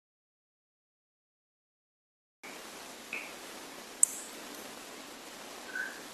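The input signal was likely lost, through a disconnected device, a failed link or a mute, while the recorder kept writing silence, which produces an audio dropout to silence in this speech clip. The dropout is already in progress when the clip begins and lasts until 2.44 s, so the first part is silence with no room tone at all. The speech then enters abruptly, and whatever was said before that point is gone.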